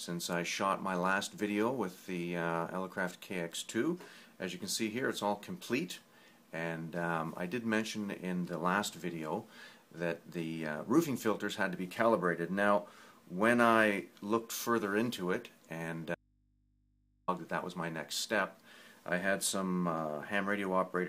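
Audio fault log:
16.15–17.28 s, audio dropout to a faint residue: the wanted sound cuts out abruptly for about 1.13 s and returns just as suddenly, with no fade at either edge. The gap is not silent but holds a low mains hum, around 40 dB below the normal signal level. That points to a likely break in the source feed while the input and everything after it stayed live, so the open input's hum passed through in place of the signal.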